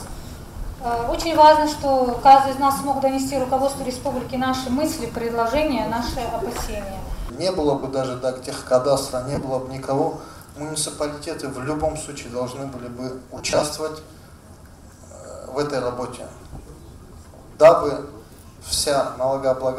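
At 7.78 s, lost LE Audio frames produce a 45 ms hole, consistent with six consecutive 7.5 ms frames. The LC3 decoder repeats the last spectrum with randomised signs, so tonal content smears into noise. At 9.35 s, losses totalling about 52 ms scatter across 75 ms in short runs of around 20 ms. At 13.38 s, about 150 ms is lost across 240 ms, with runs near 30 ms, giving a longer stretch of gritty concealment over the light codec coloration.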